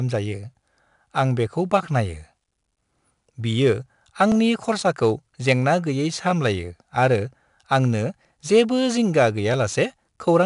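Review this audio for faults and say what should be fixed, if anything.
4-bit ADPCM compression runs throughout. Gritty, level-following hiss rides on the speech and sharp onsets distort because the adaptive step lags. Nothing sounds above 10.6 kHz, which fits a bitrate near 89 kbps. Prevent it by recording or exporting with linear PCM or a modern codec instead.

Clock drift buffer slips are the likely cause of regular clicks from 1.70 s to 9.54 s, repeating every 2.62 s. They suggest a few dozen samples dropped or repeated each time, from a clock mismatch around 300 ppm. Prevent them by locking both devices to one clock or resampling adaptively across the boundary.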